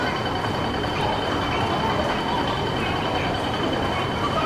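A wrong sample rate runs through the whole clip: the samples are played out faster than they were captured, with no conversion between the two rates, which fits material recorded at 22 kHz being played at 32 kHz. Everything therefore runs 1.45 times too fast and sits 6.45 semitones too high, so the audio sounds hurried and shrill.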